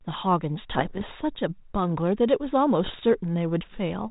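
From 0.74 to 1.05 s, and again from 2.84 to 3.02 s, there are bit errors on an ADPCM link. Flipped bits throw the decoder's step size and prediction off, so you hear pops and rough, ringing bursts with quick level jumps. The first burst is denser, under one percent, and the second is lighter. The band-limited sound fits a 32 kbit/s G.726 link.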